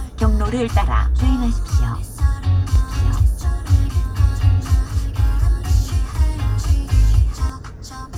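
Doubled audio track from 2.76 to 7.5 s: a second full-band copy of the sound runs about one and a half seconds behind, roughly 5 dB quieter, with no decay or room colour, and cuts in and out abruptly, likely from a slower duplicate capture path.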